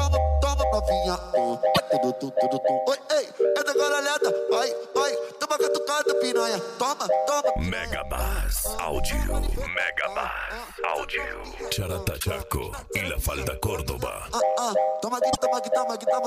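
Brief glitches, each about 80 ms, at 1.71–1.80 s, 12.16–12.25 s and 15.30–15.38 s, come from damaged data in a compressed stream, where the decoder misreads corrupted frames and resyncs.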